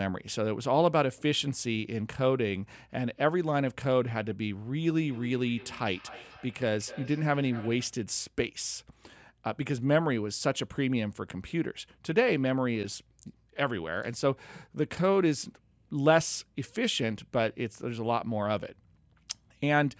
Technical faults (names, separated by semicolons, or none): feedback echo between two devices